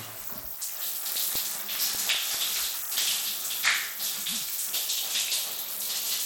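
From the start and across the whole clip, the everyday sounds carry plainly audible damage, likely from Bluetooth SBC compression. Treble thins and flickers and a gritty noise rides on everything, which fits a starved bit pool near 96 kbps. The roughness is even and grainy, not the swirling, warbly smear of a perceptual codec.

Between 0.76 and 2.35 s come nine CD scratch ticks, a regular train of about six a second, the longest lasting only about 2 milliseconds. A blemish beyond what error correction can repair passes once per disc turn, and the player patches it. The steady spacing separates this from random crackle.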